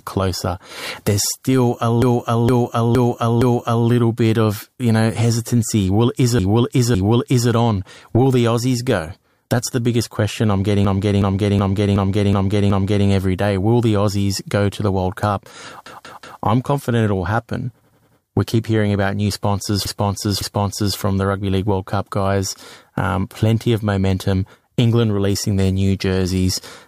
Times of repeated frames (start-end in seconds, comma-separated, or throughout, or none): 2.02-3.88, 6.39-7.50, 10.85-13.07, 15.86-16.42, 17.81-18.18, 19.85-20.97